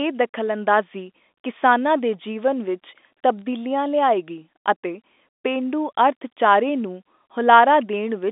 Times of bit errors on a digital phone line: 3.39-3.42

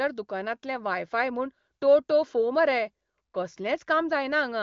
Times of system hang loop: none

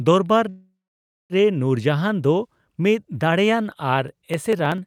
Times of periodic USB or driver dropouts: 4.08-4.86

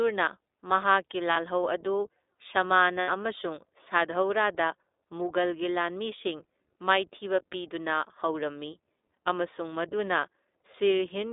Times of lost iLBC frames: 1.31-1.37, 3.00-3.10

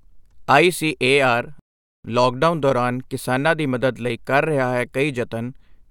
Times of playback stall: 1.59-2.05

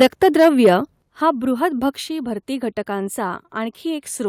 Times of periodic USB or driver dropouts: none

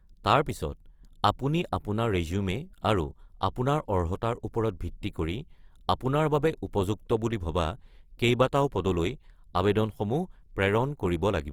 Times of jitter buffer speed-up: none

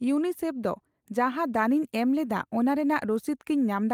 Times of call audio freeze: none

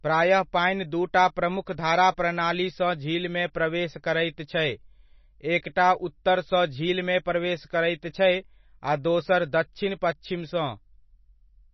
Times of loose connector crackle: none

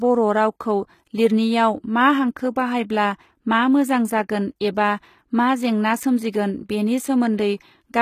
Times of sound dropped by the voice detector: none

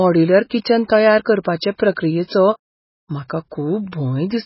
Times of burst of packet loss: none

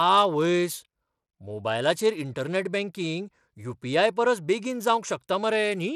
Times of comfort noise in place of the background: none

